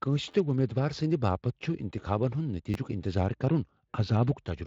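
At 0.31 to 0.34 s and again at 2.74 s there is a repeated buffer. A slice of about 12 ms, which fits a 512-sample buffer, plays two extra times and then once more. Each hard join gives a short stutter instead of the silent gap of a dropout.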